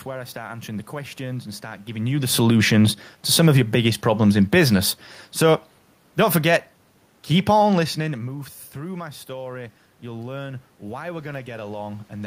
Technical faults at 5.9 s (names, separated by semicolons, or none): automatic gain falling